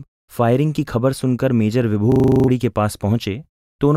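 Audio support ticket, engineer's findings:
System hang loop, 2.12 to 2.48 s. Speech freezes into one 40 ms slice repeated nine times, a rough 25 Hz buzz-stutter. Probable component: host or audio driver stalled while the DMA ring buffer, about 40 ms long, kept replaying. Roughly 0.4 s of speech lost. Distinct from packet-loss concealment or dropout stutter: the repeats are sample-identical, with no fading or smoothing, at a perfectly steady rate.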